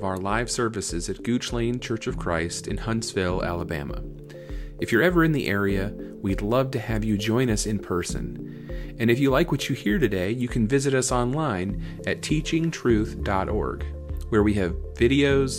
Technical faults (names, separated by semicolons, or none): crude rate conversion